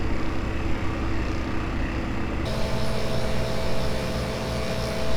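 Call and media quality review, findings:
Section at the wrong speed, 2.45 s to end: sounds jump to 1.98x speed, pitch up roughly ten semitones. Likely a clock or sample-rate mismatch in playback or editing. Timing compresses along with pitch, unlike a pitch shift alone.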